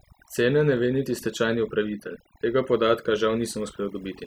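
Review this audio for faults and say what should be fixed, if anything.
Overdone noise removal runs through the whole speech clip. The noise reducer was set too aggressively. It drops individual frequency bands whenever they sit near its noise estimate. Quiet parts of the speech vanish with them. The background drops and breaks up into twinkling specks. To prevent it, use gentler reduction settings and check by ear for these artefacts before committing.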